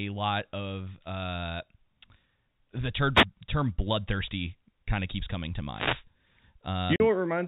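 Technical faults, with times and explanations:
3.14–3.25 s and 5.72–6.04 s, wireless microphone noise hit: the radio link fades, receiver hiss bursts up as a swish, just before "term bloodthirsty kind of" and just after "of keeps coming to"; spectrogram shows broadband noise smears.
6.96–7.00 s, packet loss filled with silence: 40 ms dropped and replaced by silence, likely two 20 ms packets, leaving a hard-edged hole; waveform shows a flat gap, spectrogram a blank vertical stripe.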